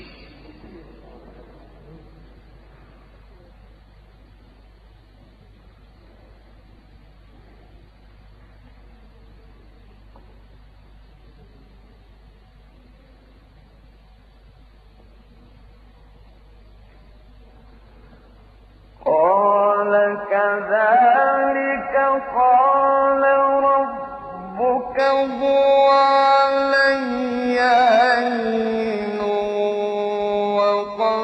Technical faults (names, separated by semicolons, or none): periodic clock jitter